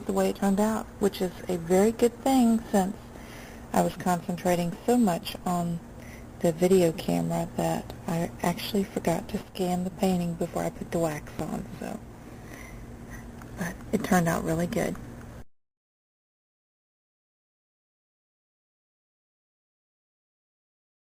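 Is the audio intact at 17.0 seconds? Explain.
Yes, the audio is intact at 17.0 seconds, with no dropout, glitch or other fault at that moment.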